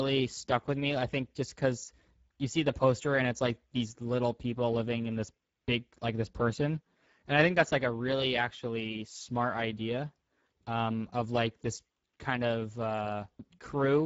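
Throughout the speech, the sound is hoarse and grainy, and nothing reaches above about 7.7 kHz. This is Speex codec damage, plainly audible: the coarse quality points to a bitrate near 10 kbps, too few bits to encode the excitation cleanly.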